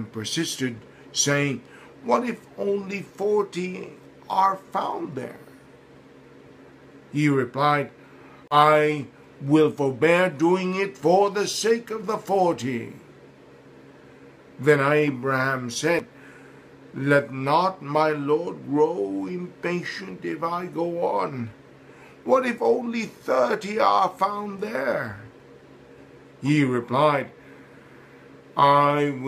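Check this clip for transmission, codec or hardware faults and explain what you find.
Two short dropouts are audible, both matching a Bluetooth stall. Between 8.48 and 8.55 s the sound cuts to 33 ms of silence, and between 15.99 and 16.02 s there is a 7 ms gap. The likely cause is radio interference holding up packets, so the headphones' buffer runs empty and playback halts until the resent data arrives. The sound then resumes, leaving a brief hole in the audio.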